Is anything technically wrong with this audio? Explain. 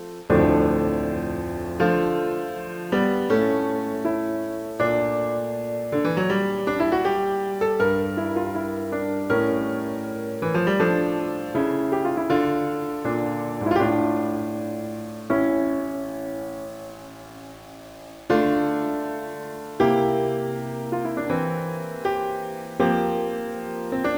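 Yes. Throughout the audio, a grainy, gritty distortion rides along with the sound, coarsest in the quiet passages, where low-level detail breaks up into a rough sputter and the faintest parts collapse toward silence. The error sits roughly 25 dB below the signal and moves with it. That behaviour points to low bit depth without dither, likely rounding to around 7 bits, so each sample snaps to widely spaced steps.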